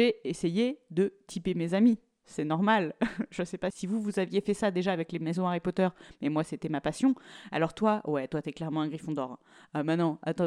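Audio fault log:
0.17–10.43 s, clock slip clicks: faint ticks roughly every tenth of a second, about a hundred in all, each a single sample lost or doubled, likely from two unsynchronised clocks drifting apart by roughly 300 ppm. Unlike random dropout clicks, they keep a steady spacing and fade wherever the speech falls silent.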